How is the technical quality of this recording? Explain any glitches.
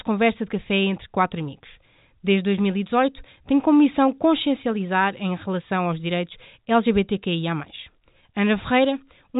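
No glitches to explain: the speech comes over a G.711 telephone channel at 64 kbps, so nothing above 3.8 kHz gets through, which is the normal bandwidth for that format rather than a defect.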